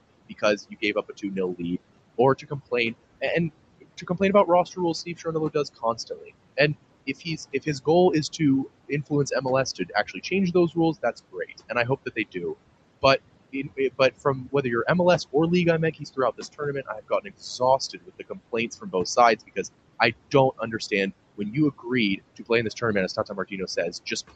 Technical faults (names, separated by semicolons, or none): overdone noise removal; noise suppressor artifacts; speech cut by the noise suppressor